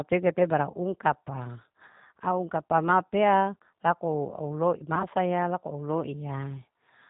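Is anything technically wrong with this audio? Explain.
Yes. The speech sounds rough and slightly synthetic throughout, with nothing above 4 kHz, plainly audible G.729 codec damage. At 8 kbit/s the decoder rebuilds the voice from a vocal tract filter, a pitch predictor and a few pulses per frame, discarding the finer detail.

At 0.72–0.76 s and 4.95–5.06 s the voice briefly smears into a fading buzzy tone or coloured noise, then returns weak or distorted. This is VoIP packet loss concealed by the speech codec. About 20 ms went missing each time, which fits a single lost packet. The decoder extrapolated from its last frame, and the recovery carried past the gap.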